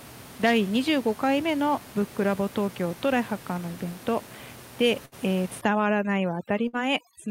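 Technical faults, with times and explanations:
5.05 to 5.15 s and 6.68 to 6.76 s, burst of packet loss: the speech briefly turns into a held buzz or fading hiss, then jumps ahead as if a sliver had been cut out. Each time a run of packets never arrived in time, so the receiver stretched the last sound it had for about 62 ms and then 55 ms, fading it down, and playback resumed roughly 60 ms further on, skipping the audio in between.
5.61 to 7.31 s, overdone noise removal: from here to the end the background, where the room noise had been sitting about 18 dB under the speech, drops and breaks up into twinkling specks. A noise reduction stage set too aggressively is shutting off individual frequency bands whenever they dip toward its noise estimate, taking the quieter parts of the voice along with the noise.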